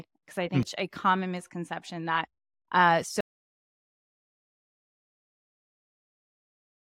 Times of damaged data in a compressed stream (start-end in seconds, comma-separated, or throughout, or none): 0.63